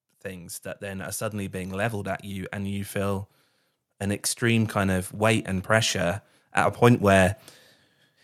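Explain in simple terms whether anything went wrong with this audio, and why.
Yes: the speech and background swell louder together from 0.23 to 3.29 s and again from 3.84 to 6.04 s. That's automatic gain rising, the level control slowly turning itself up.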